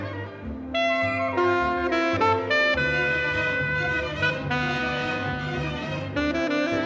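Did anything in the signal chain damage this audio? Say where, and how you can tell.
No, nothing along the way seems to have damaged this one; I can't point to any stage that left a mark on the sound.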